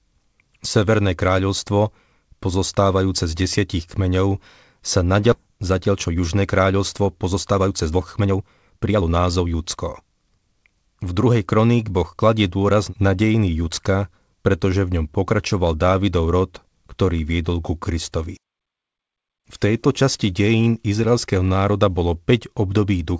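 A speech clip carried over a call link, with G.722 at 64 kbps keeping nothing above 8 kHz. Right after "z desiatich kmeňov sa", around 5.32 to 5.34 s, there's a skip ahead: about a second and a half of audio is simply gone, and playback jumps straight to later material with no fill, so the two sides butt together almost seamlessly. That points to a jitter buffer dropping queued audio when it overflowed. Then, from 5.42 to 11.59 s, you get a jitter buffer speed-up. The buffer is still holding more than its target, so it trims tiny pitch-period-sized slices over and over, running the speech at about 115% with pitch unchanged. The talker sounds noticeably rushed until roughly another second has been shaved off.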